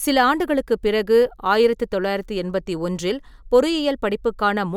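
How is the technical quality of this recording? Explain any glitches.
The speech signal shows no technical glitches at any point, with nothing interrupting or disturbing the audio.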